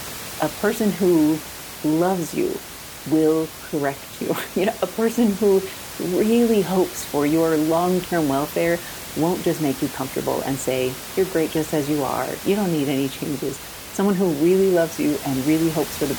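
No technical faults are audible.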